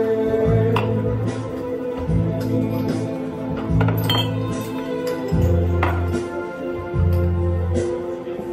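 From 5.47 s to the end there's Wi-Fi interference: a nearby radio's beacon, every 102.4 ms, gets rectified into a faint ticking about ten times a second, well below the audio.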